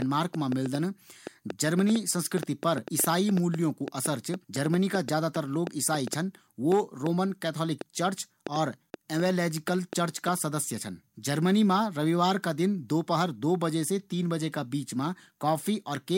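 From 0.02 to 10.29 s, just before "का सदस्य छन जर्मनी", a train of clicks ticks over the speech and its pauses, around 40 unevenly spaced pops at about 4 per second, peaking roughly 10 dB above the signal. The likely cause is interference or a faulty connection or power supply. The waveform shows near-identical sharp spikes, and the spectrogram shows thin broadband vertical lines.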